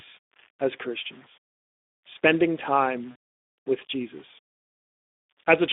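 It's a short speech clip with a few things going on. Quiet stretches and word tails come out gritty and grainy, with the grit tracking the voice and sitting only around 30 dB below it. That's most likely low bit depth without dither, consistent with rounding to something like 8 bits, so the error follows the signal instead of behaving like a steady hiss. On top of that, the whole thing has the hoarse, noisy texture of the Speex codec. It's confined to a narrow line band of roughly 250 Hz to 3.6 kHz, and the damage is plainly audible, which fits a low-rate Speex stream of around 11 kbps. Then from 3.11 to 3.15 s there's a 40 ms patch of VoIP packet loss concealed by the speech codec. The decoder stretches the last bit of sound into a fading smear, which fits two lost 20 ms frames, and it takes a moment to sound right again after that.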